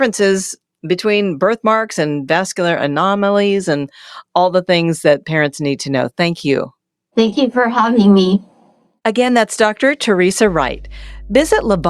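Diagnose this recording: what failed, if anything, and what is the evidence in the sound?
Mains hum enters in the analogue wiring. A steady 50 Hz tone appears under the speech at 10.47 s and runs to the end at 11.89 s. It sits roughly 20 dB below the speech. A ground loop or nearby transformer is coupling the power line into the signal.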